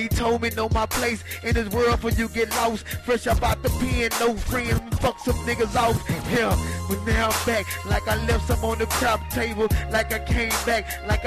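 No technical faults can be heard anywhere in the recording.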